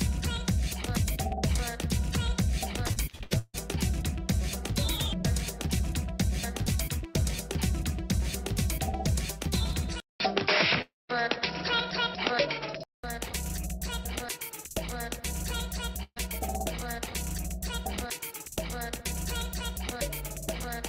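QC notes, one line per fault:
2.87–3.56 s, repeated packet loss (robotic sound): six gaps in under 0.7 s, the longest about 150 ms, with half the span patched by stretching the preceding audio. The repeated synthetic fill and missing pieces give a choppy texture.
10.0–13.04 s, input switched to a poorer device: after a 200 ms silence at the switch, the band stops at 5.6 kHz and a new noise floor appears roughly 50 dB below the signal, with level roughly unchanged. This is likely a change to a narrower-band microphone or headset profile.
10.82–11.11 s, long network dropout: 280 ms of audio is missing. The receiver extends the last sound as a fading buzz or hiss, then leaves about 180 ms of silence before playback resumes further on, consistent with a likely interruption in packet delivery.
16.03–16.18 s, burst of packet loss: 140 ms is lost. About 130 ms is filled by continuing and attenuating the last sound into a held buzz or fading hiss, with a 40 ms silent tail before the audio picks up past the missing section.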